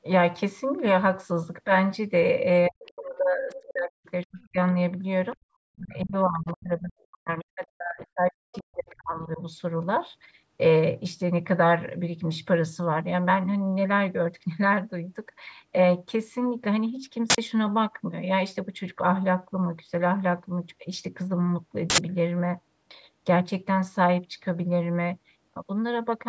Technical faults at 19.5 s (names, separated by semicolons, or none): none